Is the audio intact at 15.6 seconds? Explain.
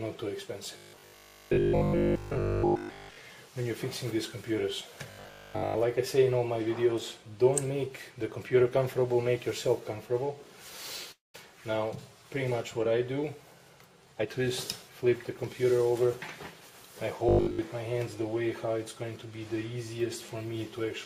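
No. At 15.6 seconds the sound is inside a jitter buffer speed-up running from 14.83 to 16.08 s. The receiver trimmed short pitch-period slices repeatedly, about a tenth of a second in total. Playback runs at 108% with unchanged pitch, so it sounds briefly hurried.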